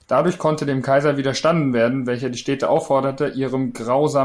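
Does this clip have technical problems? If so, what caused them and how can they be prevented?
No, no faults are audible.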